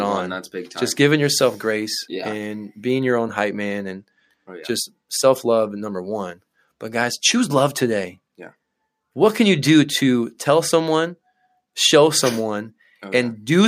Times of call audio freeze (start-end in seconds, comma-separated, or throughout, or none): none